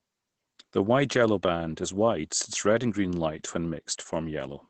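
Opus voice compression runs throughout this speech clip, which sounds consistent with a bitrate around 12 kbps. The linear-prediction coder has cut the band at about 8 kHz and quantised the excitation coarsely, so the voice is plainly muffled, hoarse and slightly robotic.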